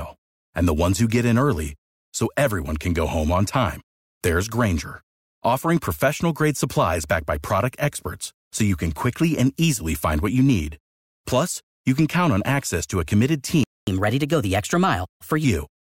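At 13.64 s, just after "access to a committed", the player most likely ran dry of buffered data or had its output thread blocked, causing a playback stall: the speech cuts to silence mid-flow for about 0.24 s, resuming at 13.87 s. The player then resamples its backlog to recover the lost time, producing catch-up at higher speed from 13.87 s to 15.44 s. Delivery runs 1.15 times faster and pitch rises by about two semitones before both return to normal.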